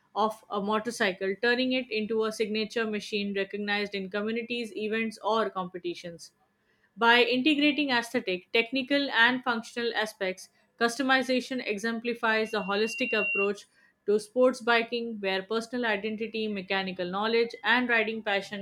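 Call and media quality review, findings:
Loudspeaker feedback squeal, 12.42 to 13.52 s: steady 2.8 kHz tone swelling over about a second to roughly speech level, then cut off. Probable component: open mic near its own loudspeaker. Mechanism: loop gain above unity at 2.8 kHz, self-reinforcing until the loop breaks.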